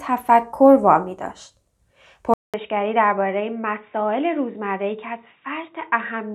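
A speech clip. At 2.34 s the sound drops out for about 200 ms. It returns dull and boxy, with nothing above 3.8 kHz, about 5 dB quieter, and a faint new background noise. This is likely an input switched to a poorer device.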